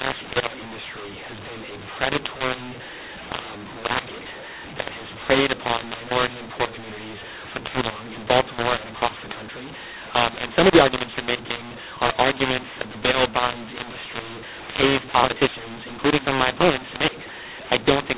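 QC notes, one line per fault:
Throughout, mu-law and A-law mixed up: harsh, distorted speech with noise filling the pauses, because A-law-coded G.711 telephone audio is being decoded as mu-law.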